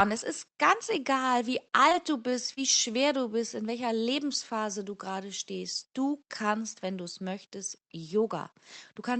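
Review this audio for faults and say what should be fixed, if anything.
Repeated packet loss (robotic sound) runs from 1.89 to 2.59 s, just after "ist ganz egal wie". Four short holes, the longest about 33 ms, are patched by extending the preceding sound, which makes it choppy. A spectrogram shows smeared, repeated harmonic bands, and the waveform shows brief stuttering copies. Forward error correction and a deeper jitter buffer on a steadier connection would prevent it.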